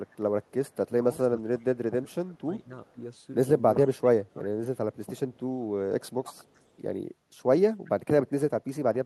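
A speech recording over a call where the far end's echo canceller likely let some loudspeaker pickup through, producing an echo leak. From 0.1 to 0.7 s, and again from 6.45 to 6.66 s, a faint delayed copy of the voice trails 385 ms behind, very low in level, roughly 35 to 40 dB under the speech. The other fault is speech suppressed in double talk. When both sides talked at once, the canceller likely could not separate the local talker from the echo and pulled everything down. The voice sinks by about 15 dB at 1.03 to 1.64 s and by about 20 dB at 2.02 to 2.99 s, 3.98 to 5.4 s and 6.07 to 6.64 s. Each dip hits in fragments adding up to a few hundred milliseconds within each stretch, so syllables fade or drop out in pieces.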